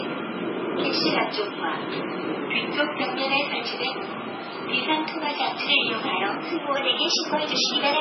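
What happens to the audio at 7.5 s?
At 7.5 s the audio sits inside a drift correction step that runs from 6.76 s to the end of the clip. Playback is about 6% fast and pitch rises by about a semitone, 101 cents. The cause is likely clock-matching software changing the playback rate in one jump to rebalance its buffer.

MP3 compression also affects this moment, as it does the whole clip. Nothing is heard above 5.6 kHz. The sound is watery and swirly, with smeared attacks. The heavy damage is likely from a very low bitrate, roughly 16 kbps.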